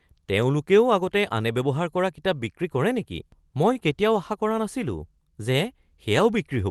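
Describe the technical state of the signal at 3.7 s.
A short stall from a late packet runs from 3.73 to 3.78 s. The jitter buffer emptied, so about 19 ms of sound is stretched, then resumes without loss.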